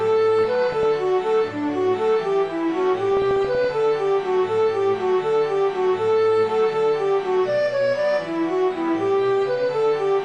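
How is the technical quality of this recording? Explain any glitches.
The technical quality is limited: a dull, coarse codec sound runs through the whole recording, and two short bursts of bubbling distortion break through it.

Throughout, the top end is missing and the remaining sound has a gurgling, granular texture as upper bands drop in and out. This is likely MP2 compression at a low bitrate, plausibly around 80 kbps, where Layer II runs out of bits, switches off upper sub-bands and quantises the rest coarsely.

From 0.39 to 0.86 s and again from 3.11 to 3.70 s there is DAB burbling: muddy bubbling with chirps and squelches. Bit errors, a few tenths of a percent, slipped past error correction into the MP2 data, so corrupted samples put short blips of noise into single sub-bands, and corrupted scale factors, where they got through, made sub-bands jump in level for up to a frame.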